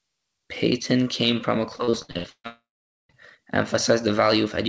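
Starting at 1.76 s, right after "came from a", packets were lost again and again until 2.47 s: seven gaps, the longest 143 ms. Each hole was patched by stretching the preceding sound, so about half of that stretch is concealment, heard as repeated packet loss with a choppy, robotic quality and pieces missing.

From 2.47 s to 3.12 s the stream likely stopped arriving altogether, a long network dropout. The last sound is carried on briefly as a fading buzz or hiss, then about 0.48 s of silence follows before the audio resumes, with that portion gone. Throughout, nothing reaches above 8 kHz, which fits a G.722 call codec at 64 kbps.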